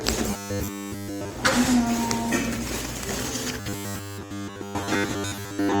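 A recording of everyday sounds that picks up a robotic sound from repeated short buffers twice: from 0.31 to 1.32 s and again from 3.6 s to the end. Both stretches carry a rigid, metallic buzz at 100 Hz, likely from the playback repeating a 10 ms slice while fresh audio is skipped. In the first stretch nearly everything is repeats; in the second most of it is, so a bit more real sound leaks through.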